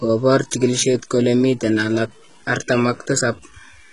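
From start to finish, the speech carries a grainy distortion roughly 35 dB below the voice. It rises and falls with the signal and roughens the quieter stretches, which sets it apart from steady hiss. The likely cause is low bit depth without dither, consistent with truncation to 8 bits.

Also throughout, the treble is heavily damaged, and s sounds come out metallic and lispy. Unlike a plain low-pass, the top end still extends to about 11.1 kHz, but it is rebuilt from copied lower bands that do not match the original. This points to HE-AAC compression at a very low bitrate, around 12 kbps.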